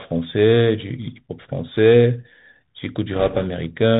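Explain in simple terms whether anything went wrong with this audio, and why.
Yes, a couple of things went wrong. The whole recording went through a Bluetooth CVSD headset codec, the narrowband phone-style link headsets use. It only carries sound up to about 4 kHz, so the speech sounds muffled and boxy, with scratchy s sounds and a grainy hiss underneath.

Then, from about 3.14 to 3.47 seconds, there are bit errors on a Bluetooth voice link: a couple of percent of the data got flipped in transit. Each error is small and fades quickly, so you hear a rushing, crackly noise over the speech rather than sharp clicks.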